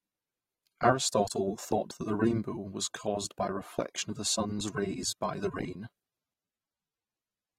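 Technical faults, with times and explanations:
Throughout, AAC compression: the speech sounds dull and smeared, with fizzy sibilants from a lowered cut-off and spectral holes, likely a low-bitrate encode around 32 kbps.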